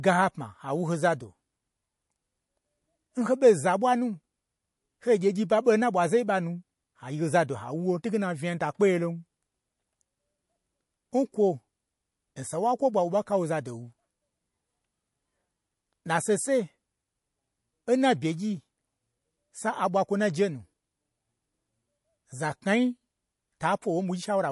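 From start to finish the speech carries plainly audible MP3 compression damage, likely from encoding at a low bitrate, which fits something around 48 kbps. Nothing survives above 11.3 kHz, so the treble ends in a flat shelf across the spectrogram. Below it, weak frequency lines flicker on and off between frames, showing as speckled, patchy gaps. The result sounds watery and swirly, with metallic chirps on s sounds and softened, smeared onsets in the waveform.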